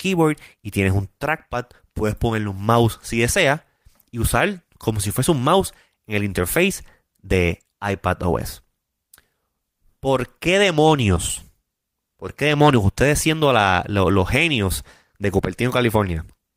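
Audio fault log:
Nothing to log here, as the speech comes through without any technical faults to point to.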